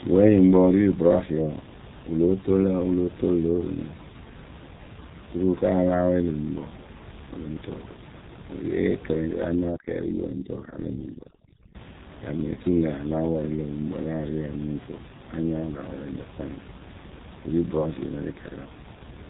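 Throughout, the speech carries G.723.1 codec damage: nothing above 3.8 kHz, a hoarse, muffled tone and smeared consonants that fit roughly 6 kbit/s. A plain low-pass filter would leave no hoarseness. Room noise sits about 18 dB below the speech.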